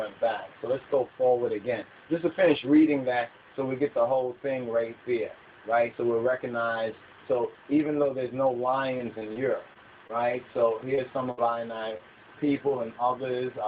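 At 8.97, 9.19 and 9.33 s, short concealed packet loss occurs three times in quick succession. Each time a 20 ms packet failed to arrive in time, so the receiver extended the preceding sound to cover the hole: 16 ms at 8.97 s, 20 ms at 9.19 s and 25 ms at 9.33 s. It then crossfaded back into the real signal. Each event sounds like a brief smear or wobble, and a very short sound can be swallowed.

Overlapping the tail of each of those three events is a lost packet rebuilt from error correction, at 8.99 to 9.01 s, 9.21 to 9.23 s and 9.35 to 9.37 s. The following packet carried a low-bitrate copy of the missing one, and the Opus decoder played that copy, so no silence opens up. Each of those 20 ms stretches sounds coarser and grainier than its surroundings. The signal stays within the roughly 8 kHz band the call codec passes throughout.

From 9.73 to 12.01 s come scattered short gaps. About five separate packets or short runs went missing across this stretch, the longest roughly 70 ms. 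Around 140 ms in total was rebuilt from error correction, and roughly 150 ms was filled by continuing the last sound, about 7 percent of the span. The sound stays largely clear but is dotted with small hiccups, ticks and momentary smears.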